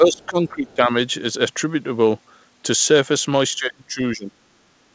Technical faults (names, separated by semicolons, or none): speech suppressed in double talk; other side's voice leaking through